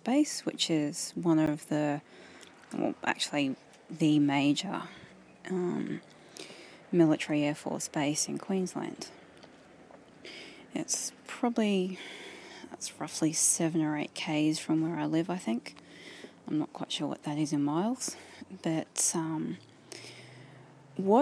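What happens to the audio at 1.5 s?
At about 1.46 s the sound drops out for roughly 11.6 ms, ending near 1.47 s: a block of digital silence. The output is replaced by a run of zeros, a length that fits a 512-sample buffer, either because that buffer was not filled in time or because a calculation produced invalid values. Being under about 15 ms, it comes across as a tick or brief dip. On a waveform it shows as a flat line with abrupt edges; a spectrogram shows a thin vertical blank strip.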